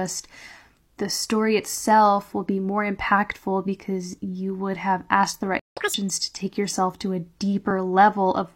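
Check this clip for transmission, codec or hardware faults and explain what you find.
Three transport faults are audible in this speech clip, all in its second half.

Playback stall, 5.59 to 5.77 s: right after "would have asked the", the speech cuts out into about 172 ms of dead silence, then resumes. This is likely the player's buffer running dry or its output thread being held up, so nothing reached the output until data or processing returned. The break lands mid-phrase, which is why it sounds like an interruption rather than a pause.

Catch-up at higher speed, 5.77 to 5.94 s: as sound returns, it rushes forward at double speed with a sharp chipmunk lift in pitch, around ten semitones up, before settling back to normal just ahead of "to take yourself to". The player is resampling its backlog to recover the time lost in the stall. Because speed and pitch are tied together in simple resampling, the tempo and the register jump up together.

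Overlap between stream segments, 7.71 to 7.75 s: just after "take yourself to a", there is a tiny skip forward. Two neighbouring segments claimed overlapping time stamps, and the player trimmed the apparent duplicate, removing a few milliseconds of audio that had never actually been repeated. The waveform jumps at the seam. Its position fits a segment boundary in a stream cut into 6-second pieces.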